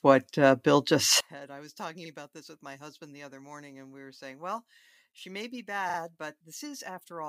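One channel inverted, from 1.20 s to the end: when the channels are summed to mono, the speech drops by about 24 dB and turns faint, leaving only the slight differences between left and right. The likely cause is reversed polarity on one stereo channel, so the centred voice, which is nearly identical in both, cancels almost entirely and only the small mismatch between the channels remains.

Repeated frames at 2.05 s and 5.89 s: each time, a 42.7 ms stretch of audio plays again, which points to a pair of compressed frames being written or sent more than once. At 2.05 s the block repeats once, adding 42.7 ms. At 5.89 s it repeats twice, adding 85.3 ms. Both are heard as a short stutter.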